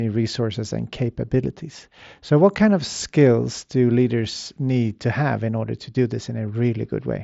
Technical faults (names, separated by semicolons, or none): none